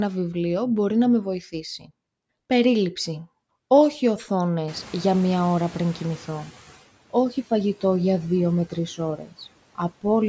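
At 1.79 to 1.9 s a short stretch of speech dips and sounds swallowed, pulled down by about 12 dB for roughly a tenth of a second. This is speech cut by the noise suppressor, which mistook that quiet part of the speech for background and turned it down with the noise.

From 4.67 s the room noise, which jumps by about 23 dB around 4.5 s, comes through with less reduction at first and only gradually sinks until 6.8 s. This is the noise suppressor catching up: its noise estimate trailed the sudden rise and took 2.13 s to adapt, finally cutting the noise by about 12 dB.

Right after "για δύο με τρεις", at 9.17 to 9.33 s, the speech again goes faint, lowered by about 10 dB for roughly 100 ms. The suppressor once more treated quiet speech as noise and cut it.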